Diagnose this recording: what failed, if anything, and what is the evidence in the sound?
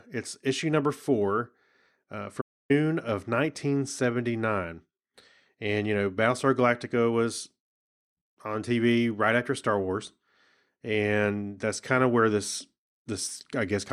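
Right after "issue number four uh", the speech drops into dead silence from 2.41 s to 2.71 s, a gap of about 285 ms, and then carries on from where it broke off. This is a playback stall at the playback stage. The cut is abrupt and the sound is silent rather than degraded, so the likely cause is that the player's buffer ran dry, or its output thread was blocked, until it could resume.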